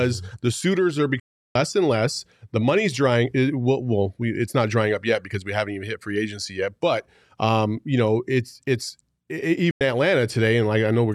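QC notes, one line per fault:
1.20 to 1.56 s, digital broadcast dropout: the receiver muted for about 0.35 s with a 3 ms fade, leaving clean silence. The lost audio is skipped, not concealed or repeated.
9.71 to 9.81 s, digital broadcast dropout: a shorter 0.1 s mute, again faded over 3 ms. The speech resumes later in the programme rather than picking up where it stopped, unlike a buffer stall.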